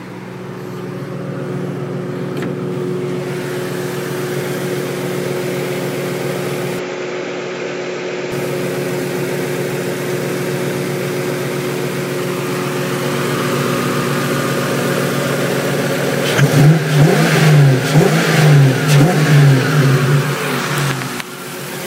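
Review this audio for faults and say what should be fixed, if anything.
From 6.79 to 8.32 s the sound abruptly turns duller and slightly quieter, about 5 dB down, with nothing above 7.6 kHz and a faint new background hiss sitting well below the signal, then returns to its fuller tone. There is no gap at either change. The likely cause is an input switched to a poorer device mid-recording, whose narrower band, lower gain and own noise floor replaced the original microphone for that stretch. To prevent it, lock the recording input to one device and disable automatic switching to headsets or call profiles.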